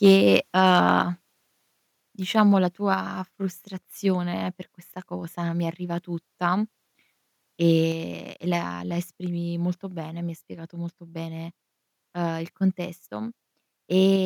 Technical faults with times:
0.04-0.37 microphone overload
0.65-0.90 microphone overload
1.02 microphone volume stepped down
2.94 microphone volume stepped down
7.92 microphone volume stepped down
14.16 microphone volume stepped down

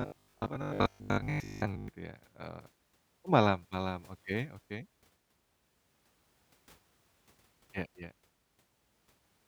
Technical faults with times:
0.02-1.88 robotic sound from repeated short buffers

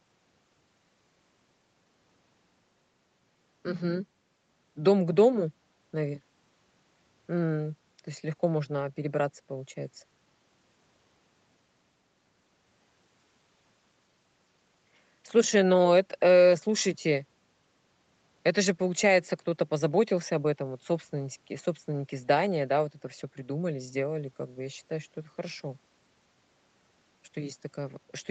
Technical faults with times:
none

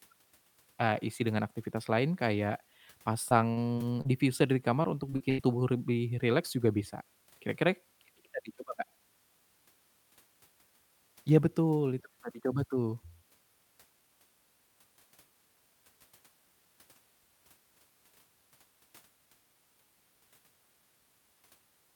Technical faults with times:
3.29-4.07 repeated packet loss (robotic sound)
4.83-5.40 repeated packet loss (robotic sound)

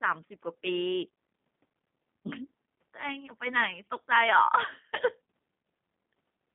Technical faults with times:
0.00-6.54 G.729 codec

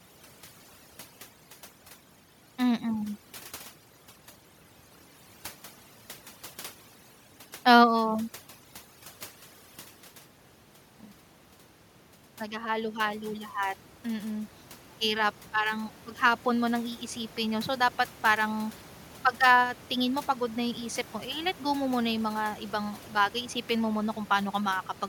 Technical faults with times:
0.00-25.08 overdone noise removal
12.39-18.79 automatic gain rising

